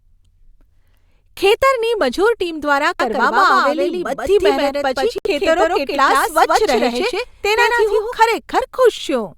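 From about 3.00 s, right after "ખેતરની મજૂર ટીમ દ્વારા", the speech gains a second copy trailing roughly 150 ms behind, at much the same loudness, so every syllable is shadowed by a dry, full-band repeat with no reverb or room colour. It cuts in and drops out abruptly, ending at 8.14 s. This doubled audio track likely comes from the same signal being captured again through a slower path and mixed back in.

At 5.18 s the sound drops to silence for about 69 ms and then resumes, the gap lasting until 5.27 s. This is likely a Bluetooth stall: interference delayed the wireless packets, the headphones' buffer emptied, and playback halted until the resent data arrived.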